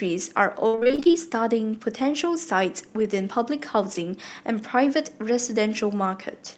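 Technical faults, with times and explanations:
0.67 to 1.15 s, repeated packet loss (robotic sound): across this half-second the audio keeps breaking into eleven short holes, the longest about 58 ms. The receiver fills each one by stretching the last stretch of sound, so about 260 ms is patched and roughly as much is simply missing, over half the span concealed. Those repeated fills stacked so closely produce the choppy, robot-like quality, with fragments of the signal dropped out.
2.99 to 3.05 s and 3.91 to 3.97 s, lost packets rebuilt from error correction: each of these 60 ms windows has about 40 ms that sound grainier and noisier than the surrounding audio, yet with no gap. That points to a couple of lost packets at each spot, rebuilt from the lower-quality backup copy that Opus tucks into the following packet. Because the call is already limited to about 8 kHz by the codec, the effect shows as roughness rather than lost treble.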